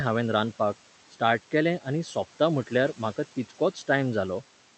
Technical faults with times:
0.00-4.77 noise suppressor artifacts

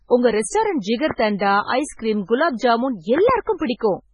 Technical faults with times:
0.00-4.13 MP3 compression
1.11-1.13 loud pop
3.18-3.31 loud pop

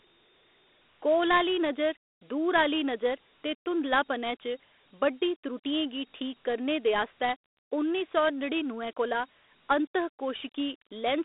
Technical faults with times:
0.00-11.24 Dialogic VOX ADPCM

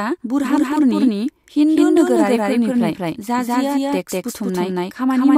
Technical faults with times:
0.00-5.38 doubled audio track

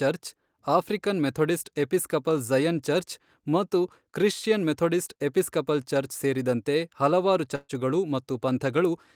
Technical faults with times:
7.55-7.71 burst of packet loss

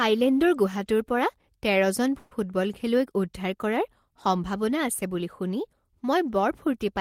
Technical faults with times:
2.18-2.32 call audio freeze

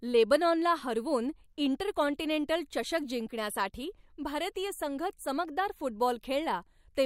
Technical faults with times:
none

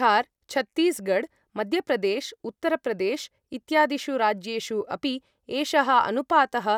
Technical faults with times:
none

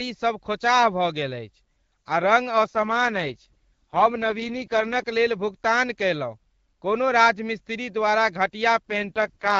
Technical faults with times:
2.64-5.04 AMR rate drop
8.88-9.59 AMR rate drop

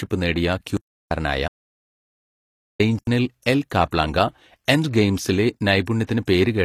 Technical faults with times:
0.00-6.65 HE-AAC compression
0.77-1.11 block of digital silence
1.48-2.79 audio dropout to silence
2.99-3.07 block of digital silence
3.43-3.92 pre-echo
5.86 pre-echo

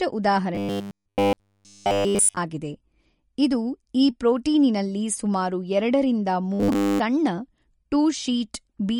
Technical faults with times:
0.00-8.99 MP3 compression
0.55-2.37 robotic sound from repeated short buffers
6.53-6.99 robotic sound from repeated short buffers

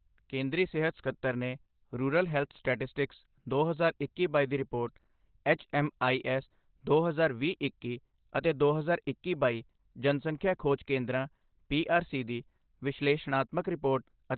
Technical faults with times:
0.00-14.37 Opus compression

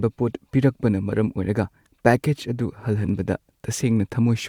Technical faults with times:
none

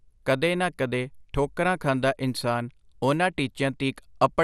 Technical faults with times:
0.00-4.44 MP2 compression

